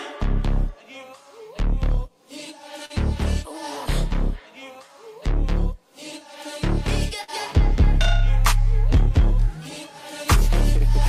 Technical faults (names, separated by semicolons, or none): short concealed packet loss